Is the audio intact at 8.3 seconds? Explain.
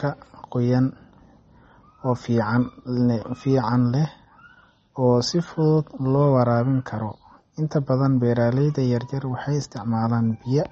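No. MP3 compression damage runs through the whole clip, including 8.3 s. The sound likely comes from an encoder short of bits, consistent with about 32 kbps, which removed everything above 8.3 kHz and zeroed weak frequency lines, leaving the speech dull, watery and swirly.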